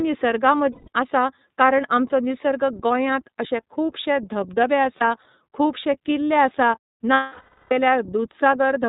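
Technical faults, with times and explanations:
Throughout: iLBC codec. The speech is band-limited to nothing above 4 kHz and carries a plainly audible rough, synthetic edge, since each 30 ms frame's excitation is coded on its own at about 13.3 kbps. This is unlike packet loss: the roughness is steady rather than appearing in bursts.
0.72 to 0.88 s, 3.48 to 3.51 s (just after "आमचो निसर्ग गोंयांत"), 4.98 to 5.02 s, 7.14 to 7.72 s: lost iLBC frames. The decoder fills each gap by repeating the last pitch cycle mixed with noise, so the gap sounds like a held, buzzy vowel. The long 0.59 s gap fades as it goes, and the voice is right again almost at once after each gap.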